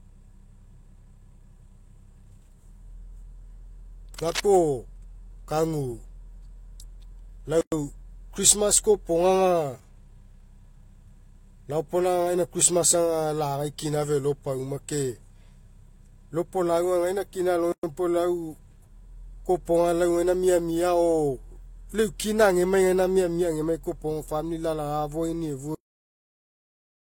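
From 4.18 to 4.42 s, a burst of cable scratch noise rides over the speech: dense, irregular crackle, about 10 dB below the voice. This is likely a worn cable, connector or control being moved, so its contact resistance jumps around. It differs from a dropout or a digital glitch because the signal never disappears. Ragged noise is layered on top of it for about a quarter of a second.

At 7.61 s and again at 17.72 s, the speech stops dead for about 112 ms and then carries on exactly where it left off. That is a gap at a join of encoded pieces. Each piece carries its encoder's start-up delay and a padded final frame, and both survive the join as silence. The edges are abrupt but slightly softened by the codec. What separates this from a network dropout is the regularity: the two gaps are the same length and exactly 10 s apart, as fixed-length segments would be. No sound is lost, either. The audio resumes at the same point rather than skipping ahead.

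At 25.75 s the speech is cut off mid-sound and falls straight to digital silence until the file ends. This is a cut-off end: the last buffers were never written or played out. Unlike a natural ending or a fade, there is no decay or room tail at all. The sound simply stops in the middle of itself.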